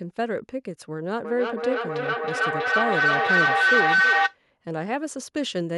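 At 1.24 s a feedback howl begins and runs until 4.39 s. Two devices in the same room share the call. Sound from one loudspeaker reaches the other microphone and returns louder on each trip. The repeats build rather than fade. They narrow to a tone around 1.5 kHz, pulsing roughly every third of a second with the loop's delay. At its loudest the howl sits about 6 dB above the speech.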